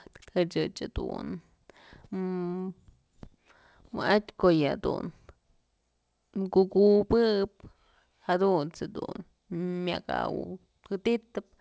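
A speech recording with no technical faults to report. It has passed through a WebRTC call path, and the band ends at 8 kHz with nothing above it, which fits a G.722 wideband codec at 64 kbps.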